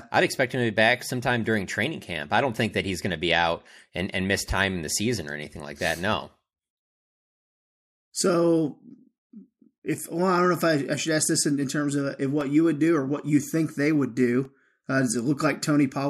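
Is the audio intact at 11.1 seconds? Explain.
Yes, at 11.1 s the speech plays through intact, with no dropout, click, distortion or other fault at that point.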